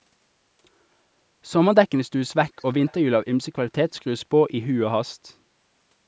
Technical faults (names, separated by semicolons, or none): echo leak